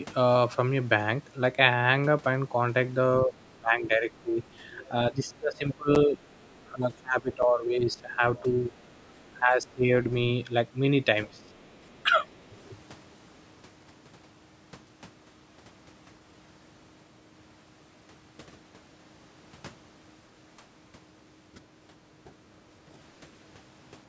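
Speech from a call, and the talker keeps getting pushed down: from 3.26 to 4.4 s, through much of 5.1 to 9.89 s, and from 11.27 to 12.57 s the level sags or breaks up by up to roughly 20 dB, with a slight dip at 22.25 to 22.3 s. That's speech suppressed in double talk, likely the echo canceller ducking everything while the far end was talking too. Two blocks of digital silence land at 5.95 and 7.42 s, each an 8 ms hard dropout, short enough to come across as a tick or dip rather than a gap, which fits the output buffer missing 128-sample blocks. You can also catch the other side's voice leaking through, very faint at about 40 dB under the talker, from 7.97 to 8.16 s and again at 11.38 to 11.42 s, likely echo the canceller didn't fully remove, and it coincides with the suppression. The band tops out at 8 kHz, and the bass roll-off from the call's microphone processing is normal.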